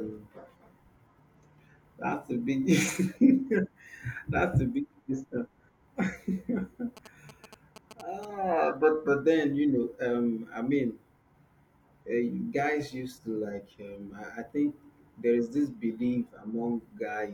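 From 6.97 to 8.25 s, just before "but but then", GSM signalling bursts break in: a nearby 2G phone's radio bursts, rectified by the audio circuit, give galloping ticks and short 217 Hz buzzes well below the speech, clustered rather than the steady buzz of a phone mid-call.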